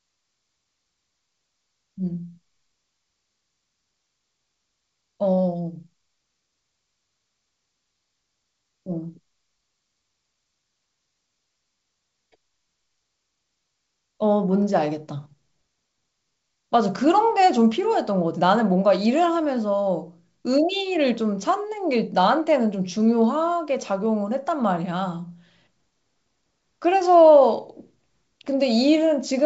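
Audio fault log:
No faults to log here; the speech comes across over G.722 wideband telephone coding at 64 kbit/s, with nothing out of the ordinary for that link.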